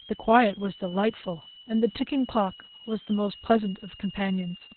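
From start to finish a switching supply whistle sits under the speech: a thin tone around 3 kHz, drifting between roughly 2.8 and 3.24 kHz as the converter's load shifts. A spectrogram shows a wavering horizontal line well below the speech level.

Across the whole clip the speech also carries heavy Opus voice compression in SILK mode. Narrowband coding removes everything above 4.3 kHz, leaving the speech muffled, hoarse and faintly robotic. That points to a very low bitrate near 6 kbps. A spectrogram shows a hard ceiling with blank space above it.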